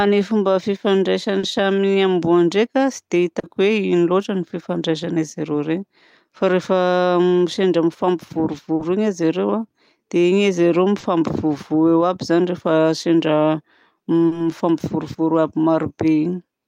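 At 1.39, 3.39, 8.75, 10.99 and 14.27 s, short concealed packet loss occurs. Each time, about 40 ms of the speech arrived too late. The decoder filled it by extending the preceding sound, then blended back. Each gap is heard as a brief smear or wobble.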